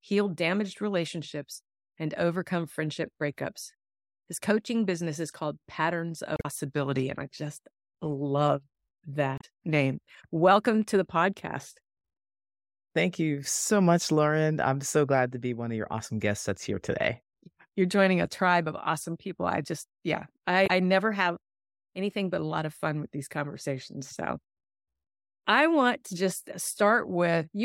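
Damaged data in a compressed stream breaks this speech at 6.34 to 6.45 s, 9.36 to 9.44 s and 20.63 to 20.70 s: corrupted frames make the decoder misread its input and lose sync while hunting for the next valid header, producing brief chirps or blips.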